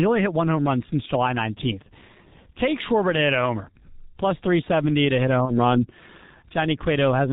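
From start to finish the speech is muffled and hoarse, with nothing above 4 kHz and consonants smeared together. That is heavy damage from the G.723.1 codec, which fits a 6.3 kbit/s stream. Its coarse 30 ms frames and slowly updated voice model cannot follow fast changes in the speech.

From 5.45 to 5.58 s the sound turns into a brief stretched buzzy tone or coloured noise that fades. The voice stays weak or distorted as it recovers. This is VoIP packet loss concealed by the speech codec. About 30 ms of audio went missing, which fits a single lost frame. The decoder filled the gap by extending its last pitch and filter with falling gain. Because each frame builds on the previous one, the damage carries on past the gap itself.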